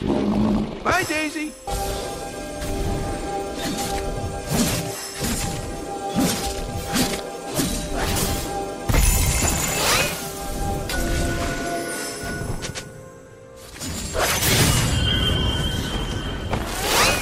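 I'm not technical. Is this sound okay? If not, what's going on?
Yes, nothing wrong is audible here.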